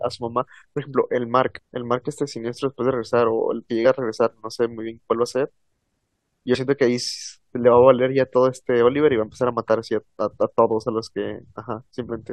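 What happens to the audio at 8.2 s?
Nothing goes wrong at 8.2 s; the speech runs on intact through that moment, with no dropout, click or distortion.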